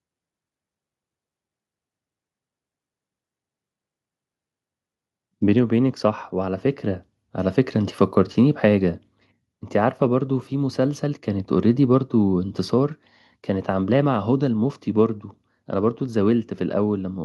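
The speech recording carries no audible technical faults at any point in the signal.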